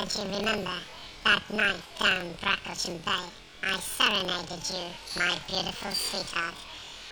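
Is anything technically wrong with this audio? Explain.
Yes, there is one fault. Planar audio read as interleaved runs through the whole clip. Each block of about 46.44 ms, which fits a 2048-sample block, stores all left-channel samples followed by all right-channel samples, but playback takes them as alternating left-right pairs. Each channel's half of the block therefore plays at double speed, one after the other. The pacing stays correct, but the sound is shifted up a full octave (12 semitones), with a flutter at the 21.5 Hz block rate.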